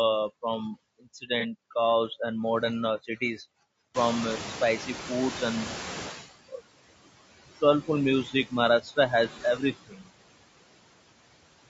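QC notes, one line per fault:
Throughout, noise suppressor artifacts: the background is pulled down by about 19 dB between phrases and swells back up under the speech.
Throughout, low-delay AAC compression: clearly audible roughness and grain on the voice, with noise creeping in between the harmonics and a dull, synthetic top end. Likely AAC-ELD at around 32 kbps, a bitrate low enough to roughen the voice.
1.40 to 1.45 s, AAC frame loss with concealment: a brief smeared, phasey blip about 30 ms long, which fits a single lost frame that the decoder patched over by reusing the previous spectrum rather than going silent.
3.94 to 6.23 s, noise suppressor catching up: the room noise jumps about 25 dB at around 4 s and comes through with less reduction at first, then sinks over roughly 2.3 s as the suppressor's noise estimate adapts, ending up cut by about 12 dB.
8.24 to 8.52 s, 8.81 to 8.97 s and 9.88 to 10.11 s, speech cut by the noise suppressor: with the noise now only about 12 dB below the voice, the suppressor mistakes bits of speech for background and ducks them by about 11, 12 and 16 dB. 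Roughly a tenth of a second in each of the first two spots and a fifth in the last sounds swallowed or faint.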